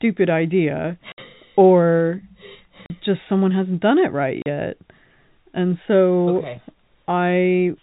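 Short dead gaps with hard edges cut into the speech at 1.12 s (60 ms), 2.86 s and 4.42 s (40 ms each): packet loss filled with silence, lengths that fit 20 ms packets dropping, over a G.711 telephone path capped at 4 kHz.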